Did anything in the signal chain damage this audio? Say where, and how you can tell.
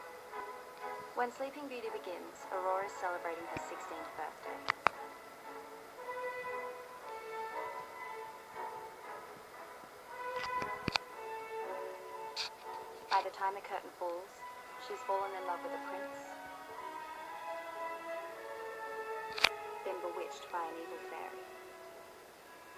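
No, nothing in the signal chain audibly damaged this audio.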